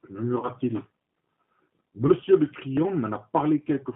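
G.729 codec damage runs through the whole recording. The speech has been squeezed through an 8 kbit/s low-rate coder that models each short frame as a vocal tract filter driven by a pitch predictor and a handful of pulses. Everything above roughly 3.4 kHz is gone and the low end is thin below 150 Hz, giving a narrow telephone band. The speech sounds plainly rough and synthetic.

VoIP packet loss concealed by the speech codec occurs first from 0.39 to 0.49 s, where about 40 ms of audio went missing, which fits two lost packets. The decoder filled the gap by extending its last pitch and filter settings at falling gain, so the sound is stretched into a buzzy tone or coloured noise that fades. Because each frame builds on the one before, the speech stays weak and distorted for tens of milliseconds or more past the gap. A shorter repeat at 2.07 to 2.13 s covers about 20 ms, consistent with one lost packet, and is followed by the same weak, distorted recovery.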